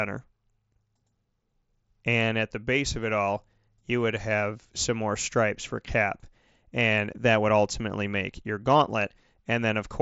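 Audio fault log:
No faults heard.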